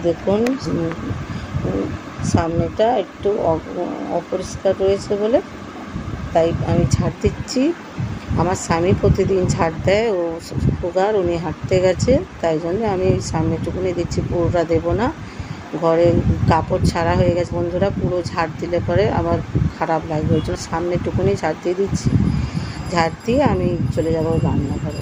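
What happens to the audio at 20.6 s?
Compressed frames skipped at 20.55 to 20.60 s: a few whole frames, consistent with 20 ms frames, are never decoded, so the audio jumps ahead by roughly 70 ms. The join is heard as either a brief smeared blip or a hard click.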